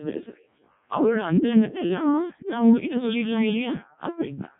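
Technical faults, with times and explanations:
throughout: Codec 2 vocoder. The speech is robotic and buzzy, heavily damaged, and has nothing above 3.7 kHz. The decoder never receives the waveform, only pitch, voicing, energy and a coarse spectral envelope, and it rebuilds the voice from sine waves. The crudeness fits the lowest 0.7 kbit/s mode. A transform codec leaves swirly, watery artefacts, and a plain band limit only dulls the sound, but here the timbre itself is synthetic, with a steady mechanical buzz.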